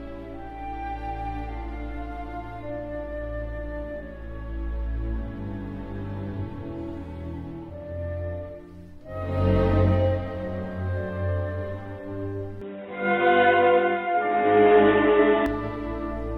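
From 12.6 to 15.5 s the sound goes dull and boxy, with nothing above 3.8 kHz, a small level jump and fresh faint background noise, likely an input switched to a poorer device.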